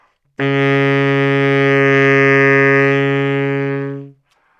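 No faults are audible anywhere in this recording of sounds.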